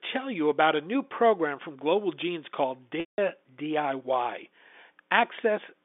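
At 3.0 s the speech briefly holds a buzzy, repeated tone that fades into silence before resuming at about 3.18 s with a short cross-fade. This is packet loss with pitch repetition: about 180 ms of telephone-band audio went missing, and the receiver looped the last pitch period to cover the gap before letting it die away.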